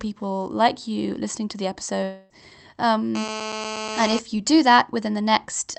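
From 2.03 to 2.32 s the speech smears into a fading buzzy tail and picks up further on with about a quarter second gone. That's most likely a long network dropout. The receiver spent all 260 ms or so continuing the last sound instead of going quiet.

Then from 3.15 to 4.19 s there's a hard, raspy buzz at 217 Hz, full of harmonics and only about 8 dB under the speech. That's classic GSM phone buzz: a nearby 2G handset on a call, its radio bursts rectified by the audio circuitry, so it holds nearly steady.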